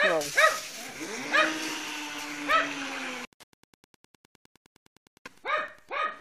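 A nearby Wi-Fi radio's 102.4 ms beacon is being rectified by the audio circuit, causing Wi-Fi interference from 1.50 to 5.99 s: faint, steady ticking roughly ten times a second, well below the sound.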